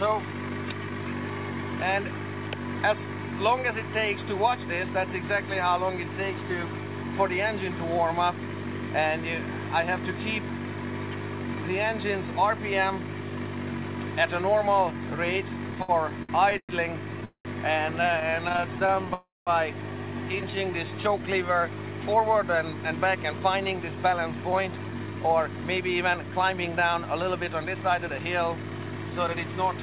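The audio arrives over a call path band-limited at 4 kHz, consistent with G.711 A-law at 64 kbps, and shows several jitter buffer faults. Repeated stalls (stutter) occur from 15.71 to 16.72 s, with eight short gaps up to 110 ms, and from 18.20 to 19.06 s, with eleven gaps of at most 25 ms. Each gap is filled by continuing the last sound, so the audio drags but nothing is lost. A call audio freeze is a single longer hold rather than a string of brief hiccups. One occurs at 17.25 to 17.48 s, with 0.2 s filled and about 0.1 s fading to silence, and another at 19.14 to 19.50 s, with 0.33 s filled and about 0.2 s silent. Both are likely caused by packets delayed in transit draining the buffer. A jitter buffer slow-down runs from 20.41 to 21.47 s at 88% speed, adding 132 ms by repeating pitch periods, so the sound stretches without dropping in pitch or breaking into gaps. A jitter buffer speed-up follows from 22.84 to 29.53 s at 110% speed. 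It trims roughly 0.7 s of pitch periods to shed excess delay, so the sound hurries along at unchanged pitch instead of skipping.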